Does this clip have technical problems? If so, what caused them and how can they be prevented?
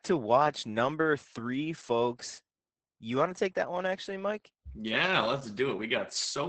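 Yes. Opus voice compression affects the speech from start to finish. The SILK coder, at a rate consistent with roughly 10 kbps, coarsely quantises the excitation, so the voice sounds muffled, hoarse and faintly robotic, and a spectrogram shows a hard ceiling with nothing above 8.7 kHz. Encoding at a higher bitrate prevents this.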